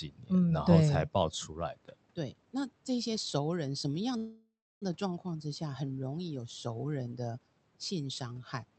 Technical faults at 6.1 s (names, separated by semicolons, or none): none